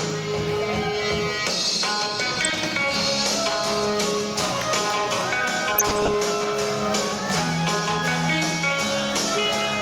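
DAB burbling appears from 2.31 to 2.53 s and again from 5.72 to 6.14 s, short blips of noise in single sub-bands over the sound. A bit error rate of around 0.4 and 0.5 percent let errors past the error correction into the audio data, not dropouts to silence.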